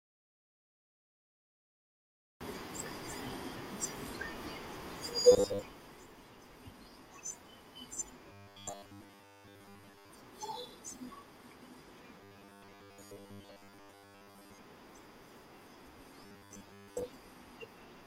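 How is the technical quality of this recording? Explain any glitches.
The speech has a recurring robotic buzz. Robotic sound from repeated short buffers shows up at 5.32–5.62, 8.32–10.11, 12.18–14.58 and 16.24–17.04 s. You hear a stiff 100 Hz metallic drone that still loosely tracks the speech, likely because a 10 ms chunk keeps getting replayed while most of the real audio is skipped.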